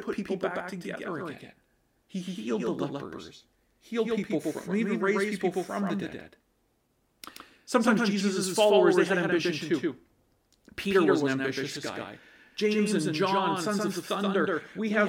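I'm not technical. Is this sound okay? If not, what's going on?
No. There's a doubled audio track: the speech was likely captured twice, with the second copy arriving about a sixth of a second late. Throughout the clip, every syllable repeats at nearly the same loudness, like a crisp, clean echo.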